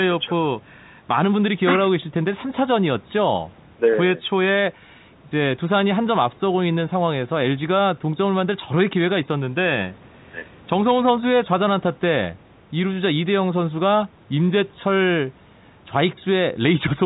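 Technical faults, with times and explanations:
No faults found; the speech carries the expected telephone-band character of G.711 A-law coding and call microphone processing, both working as intended.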